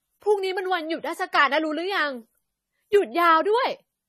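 The speech has been run through a low-bitrate encoder, most likely AAC compression of the AAC-LC kind, and the damage is plainly audible from start to finish. The coder is starving its frequency lines of bits, which fits a rate of around 32 kbps. Nothing survives above 14 kHz, so the top end sounds dull, and the coarse quantisation smears detail, leaving a warbly, fizzy texture on sustained vowels and sibilants.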